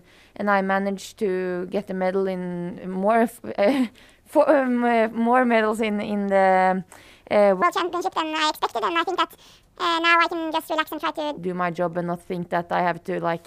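A section at the wrong speed runs from 7.62 to 11.38 s, where the audio plays back 1.7 times faster than it was recorded. Because speed and pitch move together here, the sound becomes hurried and jumps up by roughly ten semitones, then drops back to normal at the end of the section. The likely cause is an editor or player that timed this stretch to the wrong clock.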